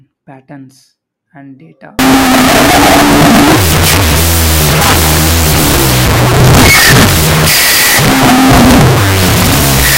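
From 1.99 s to the end there's a wrong sample width: 16-bit samples read as unsigned 8-bit, giving loud noise over half-speed, lowered speech.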